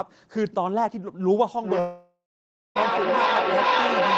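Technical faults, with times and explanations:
1.63 s to 4.18 s, feedback echo between two devices: From 1.63 s the sound comes back again and again at a fixed spacing of roughly 0.4 s. The peaks reach about 3 dB above the direct speech, so the repeats stack up rather than fade out. This happens when a second device in the same room plays the call aloud and its microphone sends it back into the loop. Each device's echo canceller only removes its own playback, so the returning copy is never cancelled, and each pass comes back thinner and more ringing, limited to the call's 8 kHz bandwidth.
1.79 s to 2.77 s, long network dropout: The incoming audio breaks off and about 0.96 s of it is lost. The receiver keeps extending the last sound as a fading buzz or hiss, and then 0.58 s of silence follows before the audio resumes further along, with the lost section simply skipped. This pattern is likely caused by a run of packets failing to arrive, so the decoder's concealment filled the gap instead of real audio.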